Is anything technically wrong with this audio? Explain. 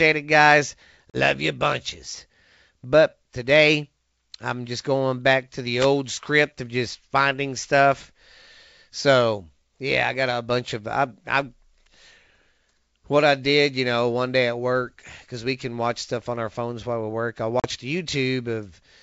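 Yes. There are two kinds of fault in this speech clip, which is carried over G.722 wideband telephone coding at 64 kbit/s.

Packet loss on an ADPCM call occurs twice: from 1.10 to 1.18 s, between "it guys" and "you bunches", and from 17.60 to 17.66 s, just after "while we work I". Each time, about 40 ms of audio, likely a couple of packets, went missing and was filled with silence. The receiving decoder's predictor and step size then no longer matched the sender's. You hear an abrupt gap, and the speech comes back slightly distorted before it settles.

A wireless microphone noise hit occurs from 5.79 to 5.87 s, between "going back to the" and "script of just finding". The FM radio link faded as reflected signals cancelled, so receiver noise rose over the audio. It is heard as a brief swish of static.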